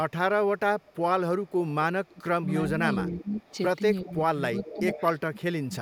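From 0.58 to 0.96 s and again from 1.43 to 1.73 s, a faint delayed copy of the speech trails the talker, about 30 and 25 dB down. This is echo leak, likely from a loudspeaker whose echo canceller let its far-end pickup through. It returns roughly 0.36 then 0.39 s late, and a spectrogram shows weak, smeared duplicates of the formant bands. From 2.08 to 2.7 s the talker's speech sinks by up to about 25 dB in patches totalling some 0.4 s. This is speech suppressed in double talk: the canceller likely couldn't tell the talker from the echo and turned both down. The waveform shows notches. Echo returns from 2.94 to 3.56 s, overlapping the next suppression. A strong echo, about 10 dB down at a 0.39 s delay, rides over a shallower dip of about 10 dB between 3.04 and 3.43 s. From 4.04 to 5.73 s suppression gouges the speech by as much as 30 dB, about a second in all, leaving hollow, chopped gaps in the envelope. 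Echo pokes through at 4.05 to 4.11 s and, loudly, at 4.6 to 5.04 s.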